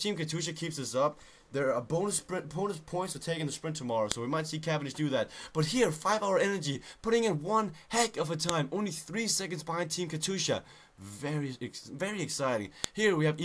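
Sharp, loud clicks snap through at 4.12, 8.49 and 12.84 s: a file header played as audio, where header bytes left on joined pieces play as samples.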